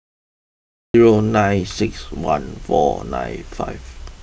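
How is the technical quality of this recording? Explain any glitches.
The recording has one clear glitch, at its start. From 0 to 0.94 s there is digital silence, then speech enters mid-sound with no attack or fade. This cut-off start means capture began late. Unlike a dropout, nothing precedes the gap.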